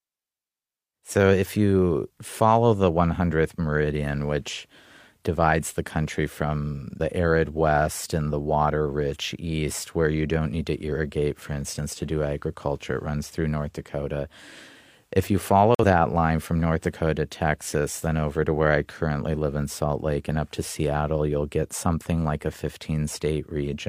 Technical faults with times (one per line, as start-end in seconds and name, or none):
15.75-15.84 corrupt frame muted